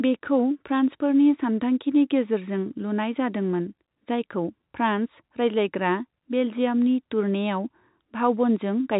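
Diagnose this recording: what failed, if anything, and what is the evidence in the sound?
Nothing failed: the speech has the narrowband character of a call path, with no energy above 4 kHz, which fits G.711 mu-law coding at 64 kbps, and no faults can be heard anywhere in the signal.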